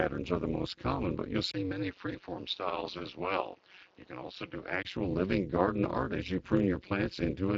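Speech runs throughout with overlap-add ripple: the level pulses once a frame at around 200 Hz with a depth of about 60 dB, giving a metallic buzz with extra tones around the voice. From 1.52 s to 4.85 s the sound turns duller and roughly 5 dB quieter, with a new noise floor some 30 dB down, and a 20 ms gap at the change, most likely the input switched to a poorer device. The light Speex coding sits underneath, with its band ending near 7.6 kHz.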